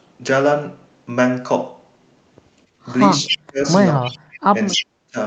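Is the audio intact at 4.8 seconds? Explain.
No. From 4.71 to 4.82 s there's an echo leak: a delayed copy of the talker, about 271 ms behind and not much quieter, likely leaking past a loudspeaker's echo canceller. Then from 4.76 to 5.16 s the speech is suppressed in double talk: the voice dips sharply, roughly 40 dB at its deepest, likely because the canceller turned everything down at once.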